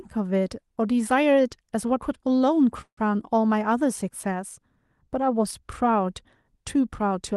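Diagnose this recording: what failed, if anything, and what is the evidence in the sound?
A call audio freeze runs from 2.81 to 2.99 s, at the network and jitter-buffer stage. Instead of the speech continuing, the last sound is stretched into a fading buzz that drops to near silence for about 80 ms. When the speech resumes it picks up where it stopped, so nothing is lost, but everything after is about 160 ms late. This points to packets that were likely held up in transit, leaving the jitter buffer empty while concealment filled the wait.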